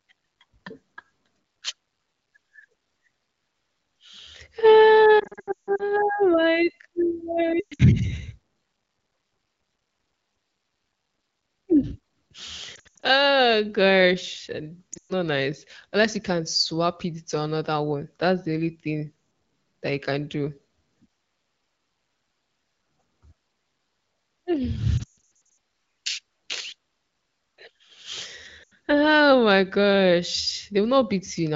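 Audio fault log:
5.19–5.83, 7.60–7.82, 12.75–13.06, 14.93–15.13 (just after "gosh and"), 24.98–25.18 and 28.64–28.72 s: lost AMR speech frames. The wideband decoder repeats its last pitch and vocal tract settings at falling gain, so the sound drops to near silence within two frames. On a spectrogram this shows as frozen harmonics tapering into dark gaps, and the waveform shows shrinking envelopes.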